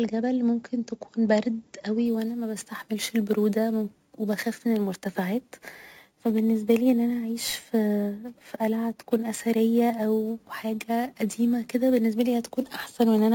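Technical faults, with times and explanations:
2.06–13.34 s, imaging from sample-and-hold upsampling: samples were repeated without smoothing, so mirrored copies of the speech spectrum fill 8–16 kHz at about 23 dB below the signal, a metallic fizz tracking speech level, consistent with 16 kHz audio raised to 44.1 kHz.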